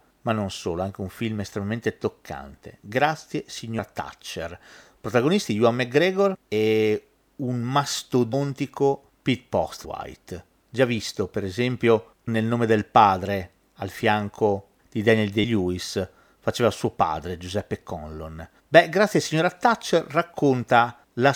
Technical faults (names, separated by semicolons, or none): compressed frames skipped